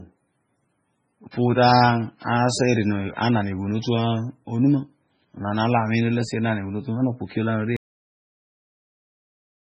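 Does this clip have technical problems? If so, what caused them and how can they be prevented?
Yes. Throughout, the speech sounds watery and swirly with nothing above 9.4 kHz, heavy MP3 compression at a rate near 16 kbps being the likely cause; unlike plain low-pass filtering, the weak detail flickers frame to frame. Encode at a higher bitrate.

From 1.31 to 1.33 s, pre-echo puts a short hiss just before an attack, because quantisation noise spreads across the whole block. Unlike a click, it precedes the attack rather than sitting on it. Higher bitrates or shorter transform blocks prevent this.

At 7.77 s the audio has a cut-off end: it drops straight to digital silence with no decay, because the final buffers were never written. Unlike a fade, it stops mid-sound. Flush and close the file properly before stopping.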